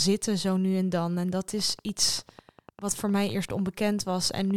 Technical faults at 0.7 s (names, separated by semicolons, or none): none